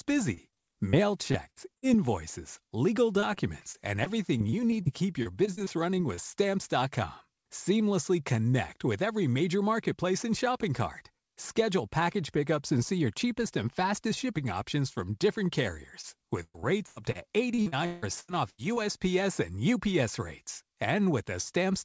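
Choppy, robotic speech breaks up repeatedly in six stretches, 0.34–0.99 s, 1.32–1.84 s, 3.20–4.87 s, 5.23–6.19 s, 16.43–17.17 s and 17.55–18.78 s. This is repeated packet loss: holes of up to 161 ms are patched by extending the previous sound, and in the last two stretches more than a third is synthesised. A brief smear at 16.01–16.05 s is short concealed packet loss, where a 20 ms hole is papered over before the real audio resumes. Throughout, nothing above 8 kHz comes through, which fits a G.722 call codec at 64 kbps.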